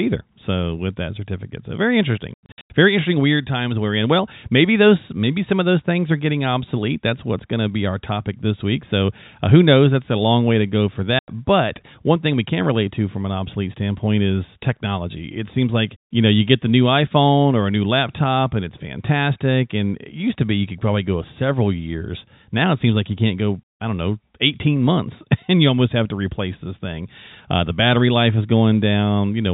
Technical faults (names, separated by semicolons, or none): packet loss filled with silence